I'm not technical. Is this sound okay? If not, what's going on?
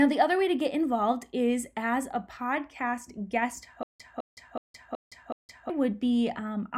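No. Right after "as a podcast guest", from 3.83 to 5.70 s, there's a stutter with silent gaps: a 0.21 s snippet repeats five times, with 0.17 s of dead silence between each. Playback likely stalled and kept retrying, so the speech meant for that stretch is gone.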